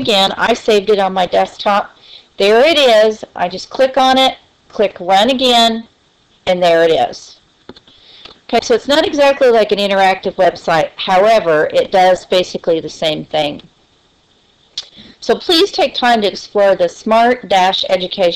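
Nothing is technically wrong with this audio clip.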